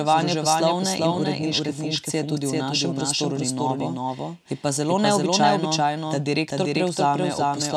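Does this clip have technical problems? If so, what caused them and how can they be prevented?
Yes. A second capture path or an out-of-step edit has likely mixed the speech in twice, producing a doubled audio track throughout: a full-band copy at about the same level trails the original by roughly 0.4 s, with no decay or room colour. Prevent it by routing each source through a single capture path and checking edits for duplicated layers.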